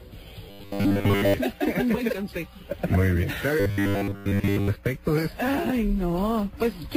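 Robotic sound from repeated short buffers appears from 0.49 to 1.34 s and again from 3.60 to 4.68 s. In both spans the audio turns into a rigid, metallic 100 Hz buzz that loosely tracks the underlying sound. The likely cause is a roughly 10 ms chunk being looped while most of the real signal is skipped. A spectrogram would show evenly spaced flat lines at multiples of 100 Hz, and the waveform would show identical 10 ms cycles.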